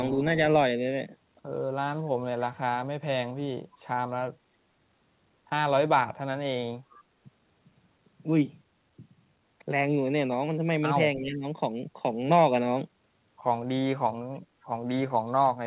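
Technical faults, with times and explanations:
6.9–7.03 s and 14.34–14.4 s, echo leak: a faint copy of the voice returns about 289 ms late, roughly 30 dB and then 35 dB below the direct speech, likely a far-end loudspeaker echo slipping past its canceller. Unlike reverberation, it is a discrete, repeated delay rather than a smooth decay.
11.16–11.45 s, speech suppressed in double talk: for about 0.3 s the voice dips by up to about 15 dB, likely because the echo canceller mistook overlapping talk for echo and ducked it. Unlike a dropout, the voice sags instead of falling to silence, within the already narrowband call audio that carries nothing above 4 kHz.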